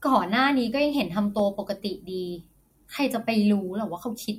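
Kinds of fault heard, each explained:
corrupt FLAC frame: a brief error near 1.39 s peaking about -18 dBFS, as flipped bits in two unchecked frames threw the decoder's prediction off until clean data resumed.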